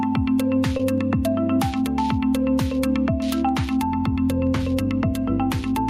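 Across the whole clip, the input gain is likely set far too high and a fast limiter or compressor keeps clamping it down. The result is gain pumping, with a swing of around 10 dB. Loud and quiet passages sit unnaturally close in level, so the sound comes across as squashed.

From 0.77 to 0.80 s there is a short concealed packet loss. About 20 ms of audio never arrived in time, and the receiver filled the gap by extending the preceding sound, carrying its pitch forward or substituting shaped noise, before blending back into the real signal. At this point the sound briefly smears or wobbles where the signal was patched over rather than heard as it was.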